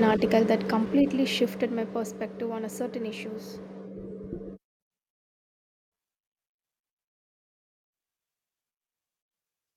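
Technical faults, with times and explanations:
Nothing stood out on listening to this speech recording.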